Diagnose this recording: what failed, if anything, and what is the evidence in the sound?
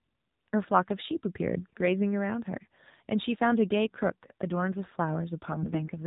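AMR narrowband mobile codec, throughout: a codec-stage fault. The speech is band-limited with nothing above 4 kHz, and it sounds plainly buzzy and synthetic, which fits AMR-NB at a low mode near 7.4 kbps. Sparse pulse excitation of the vocal-tract model cannot capture natural texture.

AMR bit errors, 5.52 to 5.88 s: a network-stage fault. Over this stretch the speech keeps its rough pitch and level but turns hoarse, scratchy and gargly. That fits around a tenth of the weakly protected bits arriving flipped, which misplaces excitation pulses and corrupts the finer gain and spectral values.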